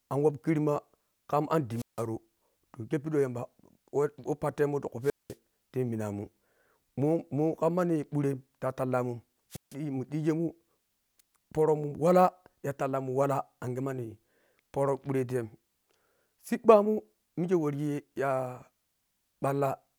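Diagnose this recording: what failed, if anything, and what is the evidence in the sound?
Three times the speech briefly collapses into a puff of hiss, a gap of near silence, then returns: at 1.73 to 2.06 s, 5.02 to 5.36 s and 9.50 to 9.75 s, with the silent holes lasting about 163 ms, 199 ms and 151 ms. This is wireless microphone squelch dropout in the analogue radio link ahead of the converter. The FM signal faded, noise rose, and the receiver's squelch muted its output until the carrier recovered.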